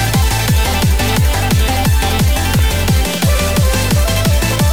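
From 2.47 to 2.69 s the processing falls behind and repeatedly misses its buffer deadlines, a case of processor overload crackle. Each missed buffer, apparently well under a millisecond long, is filled with stale audio held over from before, so the output picks up a string of small hard-edged discontinuities, around seven in all. Heard together they form a short gritty crackle laid over the sound, lasting about a fifth of a second before clearing.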